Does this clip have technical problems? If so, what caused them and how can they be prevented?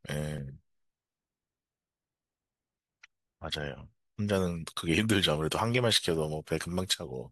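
Yes. At 0.38 s and again at 6.6 s the speech jumps forward with no gap, as if a sliver were snipped out: roughly 70 ms at the first point and about 20 ms at the second. This is likely a dropped buffer (overrun): the recording program fell behind, the hardware overwrote audio it had not yet collected, and the surviving edges were butted together. Larger capture buffers and a higher-priority recording thread prevent it.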